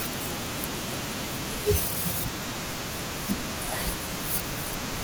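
At 1.96 s there is a tiny jump in the sound of the speech. The sound skips forward with no gap of silence. This is most likely a dropped buffer (overrun). The samples were not read out before the hardware wrote over them, so that stretch was lost and the audio on either side was spliced straight together. Less than two milliseconds goes missing, too little to take away any part of a word.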